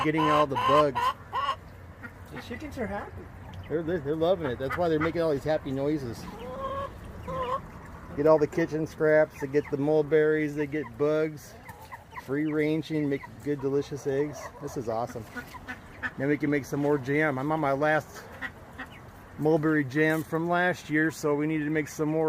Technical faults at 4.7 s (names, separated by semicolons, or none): none